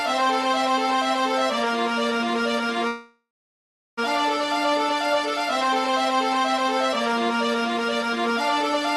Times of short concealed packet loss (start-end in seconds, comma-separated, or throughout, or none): none